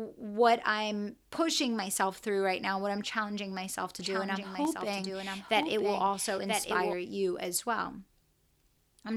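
Doubled audio track from 3.99 to 6.93 s, after "what I'm challenging myself": a copy about 5 dB quieter trails by roughly a second, likely from a second capture path.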